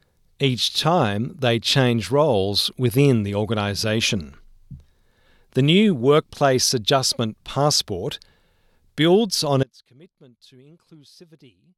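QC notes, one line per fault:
9.63 s to the end: audio dropout to a faint residue. Right after "builds on" the speech cuts out abruptly rather than pausing or fading, leaving only a faint leak about 30 dB down, likely because the signal was lost while the downstream path stayed live.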